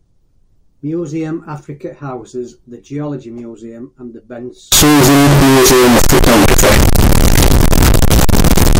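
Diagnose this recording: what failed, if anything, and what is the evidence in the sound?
From 4.72 s, right after "and the", the speech abruptly becomes extremely loud and harsh, with a buzzy, almost square-edged quality. The background noise rises to the same level as the speech, yet the pitch contour stays followable through to the end at 8.8 s. This points to sample-format conversion, likely a float read as integer: 32-bit float samples interpreted as 32-bit integers. The sign and exponent bits then dominate each value, pinning the waveform at an almost fixed, high level no matter how quiet the original was.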